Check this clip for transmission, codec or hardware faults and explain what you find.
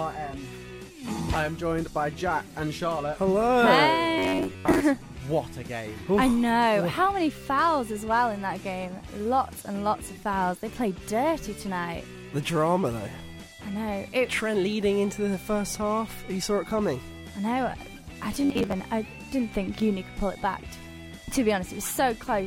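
Two short stretches have a fault, from 4.18 to 4.81 s and from 18.32 to 18.80 s. In both, the sound turns into a rigid, metallic buzz pitched at 93.8 Hz: robotic sound from repeated short buffers. The likely cause is new audio arriving too seldom, so the playback repeats a chunk of about 10.7 ms in place of the missing material. This happens for most of the first stretch and about half of the second, and the fixed repeat rate forces that steady buzz.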